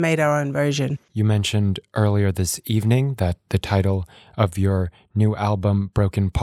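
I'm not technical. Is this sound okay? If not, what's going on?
Yes, nothing in this speech recording points to a technical problem with the signal.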